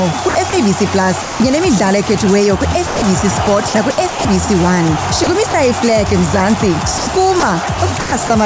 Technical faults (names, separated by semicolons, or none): sound chopped by the voice detector; sound dropped by the voice detector